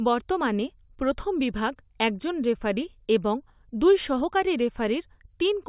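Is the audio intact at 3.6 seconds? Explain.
Yes, the speech at 3.6 seconds is intact, with no dropout, click or other fault at that moment.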